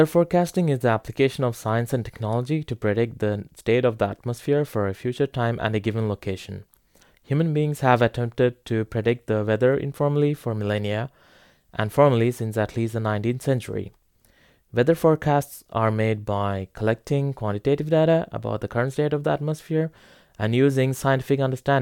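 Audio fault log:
The speech signal holds steady at a consistent level and bandwidth, with nothing in it that departs from normal behaviour.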